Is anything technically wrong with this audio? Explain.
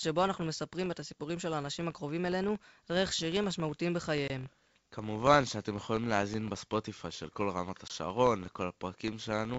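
Yes, there are two problems.

A filter restarted on every block runs throughout the clip. Because the filter discards its state and starts each block from silence, every block opens with a small transient. The result is a steady buzz at about 43.1 Hz, which fits a 1024-sample block, and it rises and falls with the speech level.

Packet loss on an ADPCM call occurs at 4.28–4.30 s and again at 7.88–7.92 s. Each time, about 20 ms of audio, roughly a single packet, drops to hard-edged silence. The G.722 decoder's adaptive predictor and step size then lose sync with the sender, so the speech returns slightly distorted and settles within a few tens of milliseconds.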